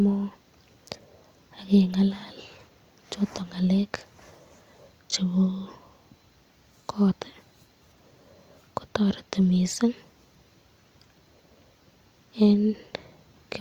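Nothing in the speech recording stood out as a technical problem on listening.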